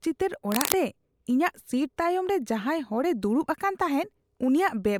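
From 0.52 to 0.84 s, a dense, ragged burst of scratching and rustling sits over the speech, only a little quieter than the talker, so it is hard to miss for that third of a second. This is cable scratch noise, likely caused by a worn cable, plug or control being moved while recording. As its contact resistance jumped around rapidly, the signal picked up these uneven crackling bursts on top of the speech.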